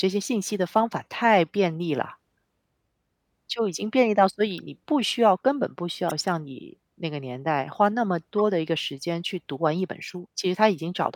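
Corrupt frame decoded at 4.58 s, 6.09–6.12 s, 8.38–8.42 s and 10.07–10.13 s. Each time, a few compressed frames arrived with damaged bits and were decoded anyway, putting energy at wrong frequencies. Each is heard as a brief chirp or burst of noise, loudest near 6.1 s and faintest at 4.58 s.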